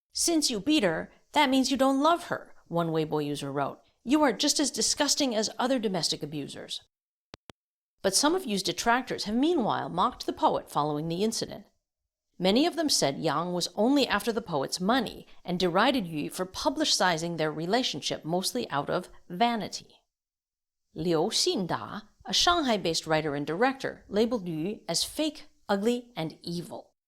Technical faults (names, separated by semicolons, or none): loud pop